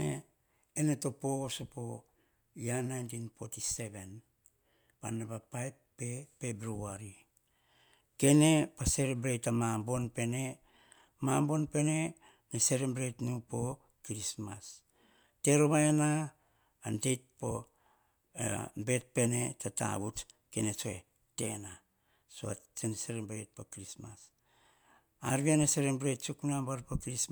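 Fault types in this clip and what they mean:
Nothing stood out on listening to the speech here; no fault could be heard at any point.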